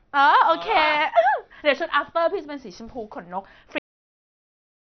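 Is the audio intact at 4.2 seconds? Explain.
No. At 4.2 seconds the clip is inside a cut-off end, which runs from the abrupt stop at 3.78 s to the end of the file. The final stretch of audio was never written out, so the speech is chopped mid-sound and falls straight to digital silence with no natural decay. A dropout would resume after a gap, and a fade-out would taper, but here the signal simply ends and stays silent for the last 1.2 seconds.

Before that stop, the speech carries heavy compression damage whose likely cause is MP2 encoding at a low rate, which fits roughly 48 kbps. The sound is dull, with nothing above about 6.2 kHz, and has a gurgling, granular texture as upper sub-bands starve of bits, switch on and off, and the surviving bands are coarsely quantised. A plain low-pass filter would only sound muffled. This has the extra flickering grit on top.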